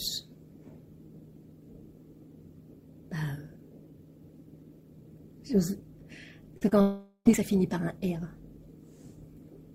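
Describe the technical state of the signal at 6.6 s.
Short concealed packet loss hits this moment twice. From 6.57 to 6.63 s about 40 ms of audio arrived too late for the decoder, and the receiver bridged the gap with roughly 36 ms of synthesized continuation. A second gap follows at 6.69 to 6.73 s, about 20 ms missing and 23 ms filled. Each patch extends the preceding sound before blending back into real audio, so the passage carries a brief smeared, wobbling texture, and a short sound inside either gap can drop out.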